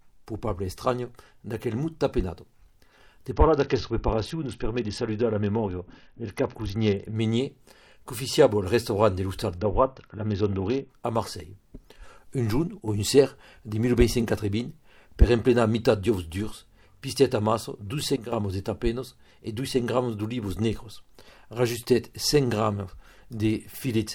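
From 3.32 to 7.16 s and again from 9.58 to 10.90 s, the treble goes dull and a gritty, granular noise rises under the sound. This is a Bluetooth SBC bit pool drop: a congested link made the encoder starve its upper sub-bands and quantise the rest coarsely, consistent with the bit pool falling from 28 to 7, around 66 kbps. At 12.80 to 12.88 s the level abruptly falls by about 5 dB, and at 18.16 to 18.32 s by about 8 dB, with background noise stepping down in lockstep. Each is a sudden gain jump, likely from a digital gain change applied between consecutive samples without any ramp.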